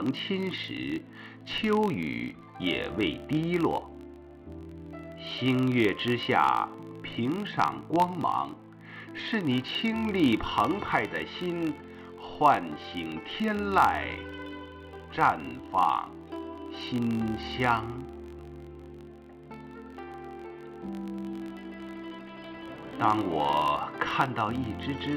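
A steady buzz at about 46.9 Hz, rising and falling with the level of the sound, runs through the whole clip. It is a filter restarted on every block: its state resets each block, causing a small transient each time, a rate that fits 1024-sample blocks.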